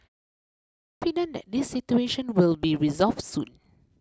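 At 0.49 s, after a pause of about half a second, the speech bursts in abruptly with its opening sounds missing. This clipped start after a pause swallows roughly 0.53 s, to 1.02 s, while the output device wakes from its idle state.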